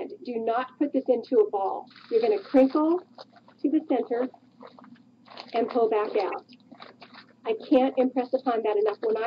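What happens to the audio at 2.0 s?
Nothing goes wrong at 2.0 s; the audio plays through that moment intact, with no dropout, click, glitch or other fault.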